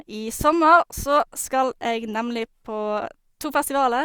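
No technical faults can be heard anywhere in this speech recording. There is nothing here that calls for a time or a value.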